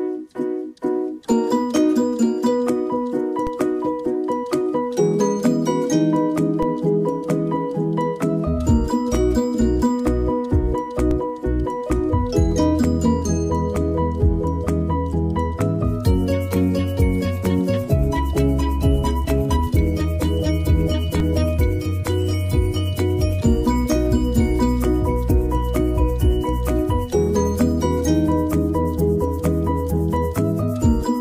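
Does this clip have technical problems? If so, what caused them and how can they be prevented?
Yes. A DC step occurs at 3.47, 6.63, 11.11 and 21.20 s: the waveform's zero line jumps by about -16 to -15 dBFS, then drains away through a 20 Hz high-pass, so each jump lands as a low thump beneath the continuing sound. Keeping converters from recalibrating mid-recording and blocking DC at any switched input prevents this.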